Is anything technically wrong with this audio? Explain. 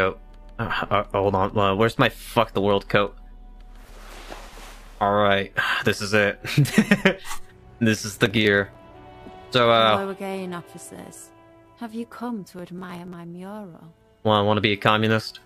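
Yes. Gritty bursts of crackle tear through the sound from 8.26 to 8.75 s and from 12.59 to 13.14 s. This is processor overload crackle: the processor repeatedly missed deadlines for very short buffers, well under a millisecond each, skipping them and leaving a rapid string of hard-edged gaps.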